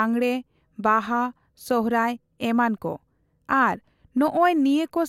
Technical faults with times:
none

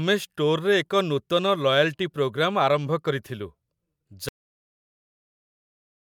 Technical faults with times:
4.29-6.14 cut-off end

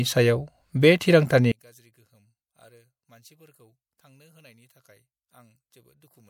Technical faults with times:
1.52-6.29 one channel inverted

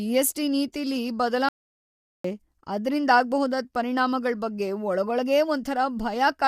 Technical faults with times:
0.00-6.47 low-delay AAC compression
1.49-2.24 audio dropout to silence

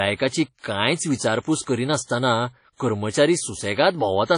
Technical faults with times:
0.00-4.37 WMA compression

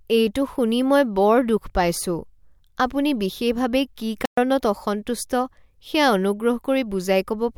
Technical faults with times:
4.25-4.37 playback stall

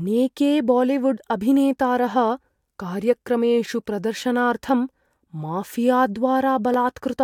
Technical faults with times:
3.66-6.74 periodic USB or driver dropouts

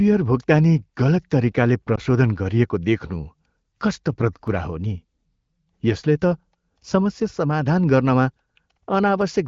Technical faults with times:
1.96-2.00 lost AMR speech frames
2.10-9.21 clock drift buffer slips

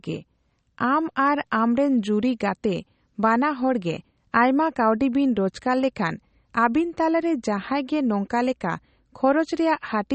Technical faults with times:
0.00-10.15 MP3 compression

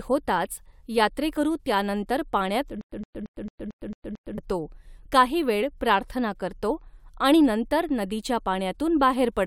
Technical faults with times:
2.81-4.38 stutter with silent gaps

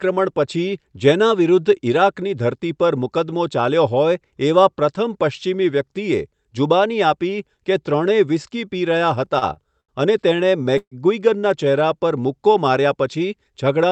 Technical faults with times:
9.25-9.91 repeated stalls (stutter)
10.36-10.94 repeated stalls (stutter)

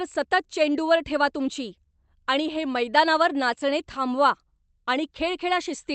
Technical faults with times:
none

